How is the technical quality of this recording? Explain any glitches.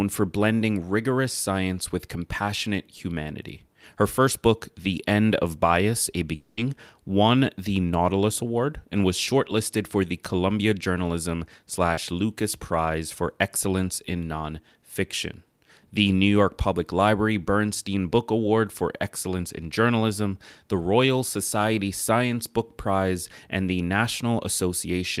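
Two network glitches disturb the speech.

From 6.35 to 6.59 s, just before "won the", the sound smears into a fading synthetic buzz or hiss, likely a long network dropout with about 220 ms filled in by the receiver.

At 11.93 to 11.99 s, a brief wobble replaces about 40 ms: short concealed packet loss, where the decoder extended the previous sound and blended back.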